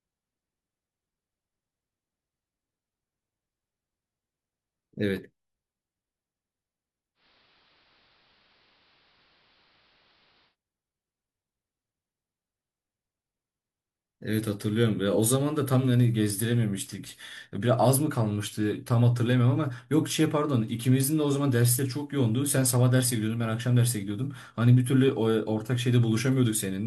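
Speech, with digital radio blending to analogue from 7.14 to 10.56 s: the receiver cross-fades over about 127 ms to the AM broadcast, so faint hiss, roughly 35 dB down, appears while the level holds steady.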